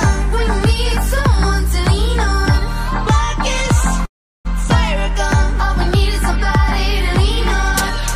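At 4.05 s the audio stalls in a call audio freeze until 4.47 s. A brief buzzy trail of the last sound fades, then about 360 ms of silence. The likely cause is delayed packets draining the jitter buffer. Playback resumes where it stopped, nothing lost, but now about 395 ms late.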